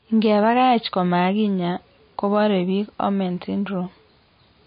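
From start to finish the speech carries plainly audible damage that is likely MP3 compression: nothing remains above 5 kHz, and the weaker parts of the spectrum flicker in and out, giving a watery, swirling texture with chirpy s sounds and smeared consonant onsets. The encoder seems starved of bits, which fits a low bitrate near 26 kbps. A simple low-pass filter would dull the treble just as much but leave no swirl.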